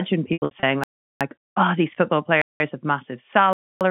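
Between 0.33 and 0.63 s there's packet loss with pitch repetition. About 180 ms went missing, scattered over 300 ms, which fits about six 30 ms packets. The receiver loops the last pitch period, so it sounds held and buzzy. The longest 90 ms run outlasts the fade and dips to silence.

Then come three blocks of digital silence, where the output simply cuts out to silence. The first, at 0.84 to 1.21 s (about 0.37 s), ends just before "oh these football". The second, at 2.42 to 2.60 s (about 0.19 s), sits between "oh these football" and "have massive". The third, at 3.53 to 3.81 s (about 0.28 s), follows "have massive". The first two lengths fit 16384- and 8192-sample buffers that weren't filled in time. All of this comes through the 150 Hz to 3.4 kHz telephone band of the G.711 line.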